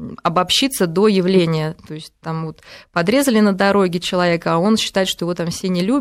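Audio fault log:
Nothing in this speech recording stood out as a fault on listening.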